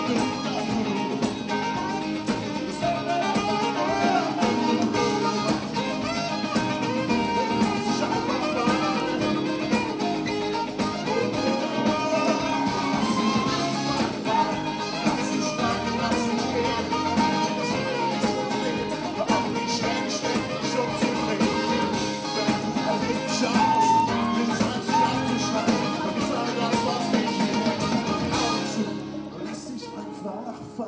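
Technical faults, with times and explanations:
Throughout: resampler restarted on every block. Each 250 ms block was converted in isolation, likely from 48 kHz down to 16 kHz, so its edges lacked true neighbouring samples. The resulting edge errors produce a regular tick at 4 Hz, heard only while sound is present.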